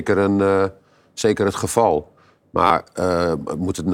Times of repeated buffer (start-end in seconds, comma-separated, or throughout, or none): 1.21, 2.67-2.70